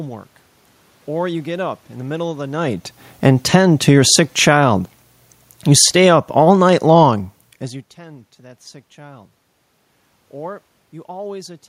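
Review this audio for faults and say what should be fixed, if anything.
Automatic gain falling happens twice. The first runs from 2.54 to 4.63 s, just after "the middle of the", and lowers the level by about 8 dB. The second runs from 5.6 to 7.77 s, ending just before "tend to that sick", and lowers it by about 6 dB. Each time, the gain control judged the input too loud or the room noise too strong, and pulled its gain down over about two seconds. Speech and background sink together. To prevent it, set a fixed input gain and turn off automatic gain control while recording.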